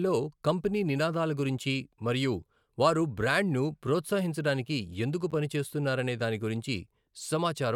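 At 5.31 to 5.33 s, a short burst cuts into the speech. This is a corrupt frame decoded fault. Bits inside the compressed data were flipped, yet the decoder played the damaged material anyway. About two frames are affected. Misread gains and codes place energy at wrong frequencies for roughly 24 ms. It sounds like a brief chirpy blip of noise. The error is fairly quiet, peaking at about -30 dBFS.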